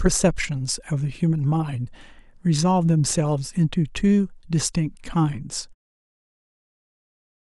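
No technical faults are audible in this recording.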